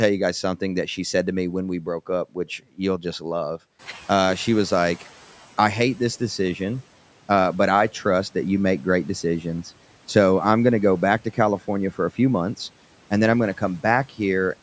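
Just after "you'll just love", at 3.79 s, the room noise jumps about 15 dB and comes through with less reduction at first, then sinks about 10 dB by 5.46 s, before "I hate this decision". This is the noise suppressor catching up: its noise estimate took 1.67 s to track the sudden rise.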